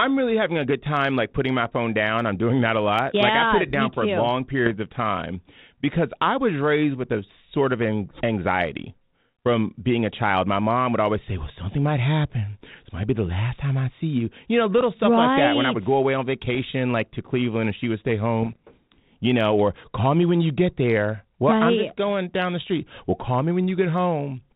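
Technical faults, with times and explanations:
1.64–1.67 s (after "time like putting my"), 4.66–4.71 s, 14.78–14.84 s, 16.55–16.58 s, 18.43–18.56 s (after "and she would stay"), 23.19 s: bit errors on an ADPCM link. Corrupted bits knock the decoder's step size and predictor off track, so each hit is a pop or rough, level-jumping burst that rings on briefly rather than a clean dropout. The steady band-limited G.726 character around the bursts fits a 32 kbit/s link.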